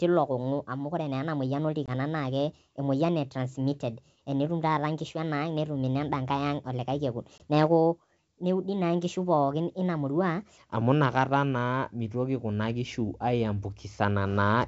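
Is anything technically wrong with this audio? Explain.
Yes, there are two kinds of fault in this speech.

The section at the wrong speed runs from 0.0 to 10.57 s. It plays 1.26 times too fast, most likely because it was fitted to a mismatched clock. Pitch rises about four semitones along with the tempo, so the speech sounds high and hurried until normal speed returns.

Packet loss on an ADPCM call occurs at 1.86–1.90 s and 7.38–7.41 s. Each time about 20 ms of audio, which points to a single lost packet, is replaced by a hard-edged gap. The decoder's predictor and step size then drift from the sender's, so the speech returns slightly distorted before settling. The G.722 wideband coding itself stays clear, with the upper band intact.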